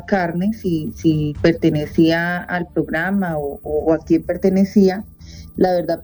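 The two channels were captured on devices running from separate clocks, with one drifting against the other by roughly 40 parts per million, so the inter-channel delay slides steadily across the whole clip, reaching around 0.2 ms by the end. These channels drifting apart, summed to mono, push comb notches slowly through the spectrum, heard as a gradual flanging sweep.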